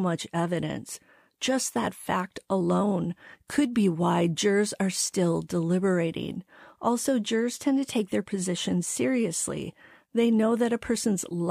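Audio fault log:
No fault found anywhere in this speech recording.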